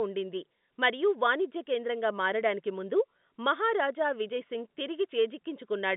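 Nothing goes wrong here; the speech just comes over an ordinary phone line, with G.711 A-law coding holding it to roughly 150 Hz to 3.6 kHz, which is simply how a normal call sounds.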